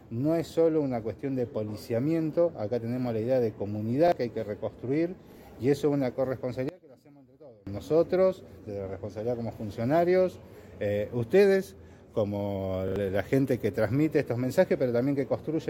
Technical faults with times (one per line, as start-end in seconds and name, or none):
4.08-4.12 repeated buffer
5.32-5.36 repeated buffer
6.69-7.67 one channel inverted
12.88-12.96 repeated buffer